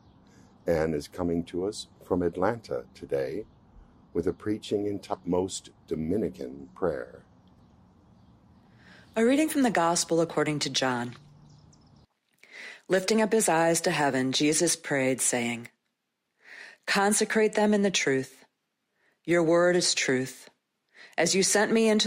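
At 5.13 s the audio jumps forward abruptly. The break lasts until about 5.19 s, with a brief blip at the join. The sound after the blip does not continue from the sound before it. The cause is likely a stream segment skipped. One chunk of a segmented stream failed to arrive, and the player moved on to the next chunk instead of waiting. A stretch of the programme is missing at that point.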